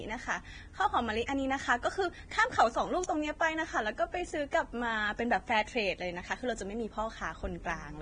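Speech recorded through what is likely Vorbis compression at a heavily reduced rate, which fits a bitrate near 23 kbps, removes everything above 9.7 kHz and turns treble detail into grainy hiss. Pre-echo spreads coding noise backward for 23 ms, from 1.26 to 1.28 s, so a short hiss precedes a smeared attack.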